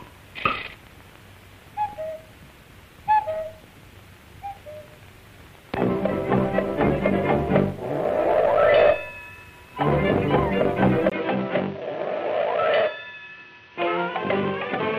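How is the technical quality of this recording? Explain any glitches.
The recording is clean until 11.10 s, when it changes character for the rest of the clip, most likely because the input switched to a poorer device. A 20 ms silence marks the switch. After it, nothing reaches above 6.1 kHz, so the audio turns dull, drops a few decibels, and sits on a faint new noise floor. A plain filter or bandwidth reduction would change only the top end. Here the gap, level shift and fresh background noise all arrive together.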